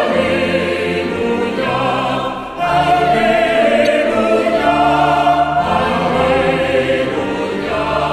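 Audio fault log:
3.83–3.87 s, damaged data in a compressed stream: a brief glitch of about 40 ms breaks into the sound. Corrupted bytes left the decoder misreading frames, losing sync and skipping forward to the next valid frame header. Unlike a plain dropout, which leaves silence, or a click, which is a single spike, this comes from the decoder misreading corrupted frames.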